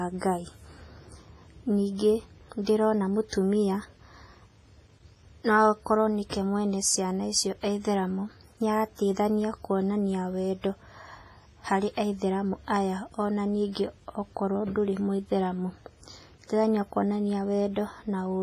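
WMA compression throughout the speech: heavy ringing, washy smearing and breathing hiss, nothing above 15.4 kHz, likely from a transform codec at roughly 24 kbps.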